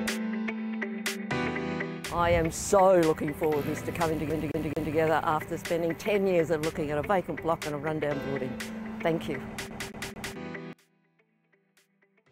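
From 4.30 to 4.95 s and again from 9.70 to 10.36 s, a CD stuck on one turn causes a rapid, even stutter: the same 218 ms slice of audio plays three times, with a brief mute at each jump back. A scratch sends the laser back one track at the same point of each rotation. Unlike a buffer underrun or network dropout, the repeated slice is identical and the rhythm is perfectly regular.

From 10.73 s to the end, the sound drops by about 26 dB, leaving only a faint copy. This is likely one channel inverted, heard summed to mono: material common to both channels cancels, leaving only their small difference.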